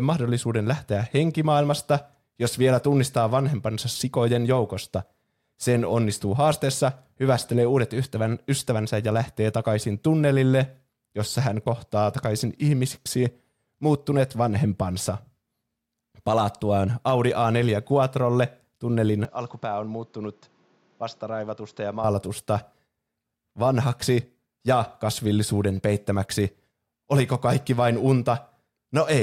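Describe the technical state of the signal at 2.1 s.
No fault is audible at 2.1 s; the signal is intact at that point in the speech.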